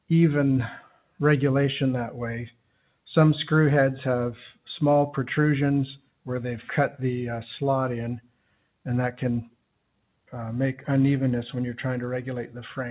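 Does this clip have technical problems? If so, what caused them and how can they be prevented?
Yes. Sound cut by the noise suppressor, between 0.81 and 1.19 s: the suppressor mistook part of the sound for background noise and pulled its level down by as much as about 12 dB, over roughly a fifth of a second in total, so that stretch sinks. The sound was already band-limited to 4 kHz by the call path, consistent with a G.711-type codec. Prevent it by lowering the suppressor's strength or disabling it.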